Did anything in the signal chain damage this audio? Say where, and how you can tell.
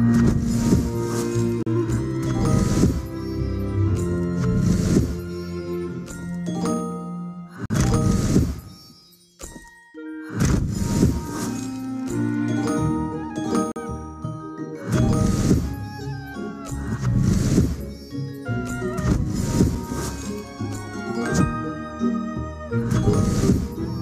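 Yes, at the playback stage: a gap between stream segments. Hard-edged silences land at 1.63–1.67, 7.66–7.70, 13.72–13.76 and 19.75 s, spaced every 6 s. The segment timestamps don't quite meet, so the player pads each seam with roughly 6 to 45 ms of silence, and nothing is lost.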